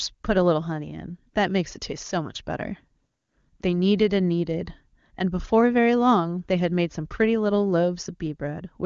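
No technical faults can be heard in this speech. It carries the bandwidth of the AMR wideband (HD Voice) codec, and any coding effect is faint at most, which fits its highest rate of 23.85 kbit/s.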